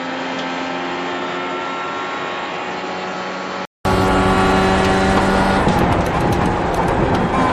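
From the start to 3.85 s the sound is dull and about 10 dB quieter, with nothing above 7.6 kHz. That's likely an input switched to a poorer device, which clears after a 200 ms gap. At 6.77 to 6.84 s a corrupt frame was decoded, so a few damaged frames come out as a harsh burst peaking around -5 dBFS.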